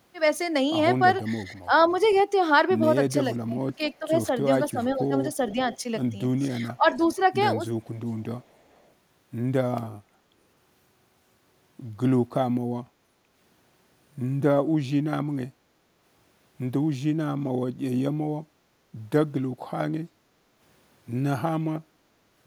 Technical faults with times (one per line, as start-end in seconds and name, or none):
1.23-2.23 echo leak
1.44-1.71 speech suppressed in double talk
3.33-3.38 echo leak
3.45-5.56 speech suppressed in double talk
4.51-8.91 echo leak
6.77-6.99 speech suppressed in double talk
20.13-20.51 background gated by the echo canceller